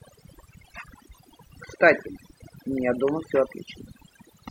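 Overdone noise removal runs throughout the speech, muting frequency bands near the noise floor, leaving near-silent gaps with twinkling specks.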